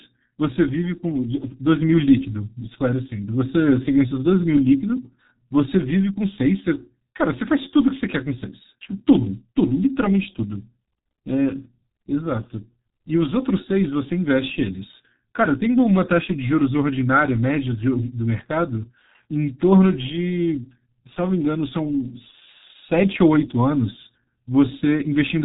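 Speech runs muffled and hoarse from start to finish, with consonants smeared together and no audible content above about 3.8 kHz, so the sound is dull and boxy throughout. This is the signature of the G.723.1 codec, an early internet-telephony coder whose heavy damage here fits its rate of around 6.3 kbit/s. It encodes in 30 ms frames and refreshes its model of the voice slowly, which blurs quick transitions and roughens the voice.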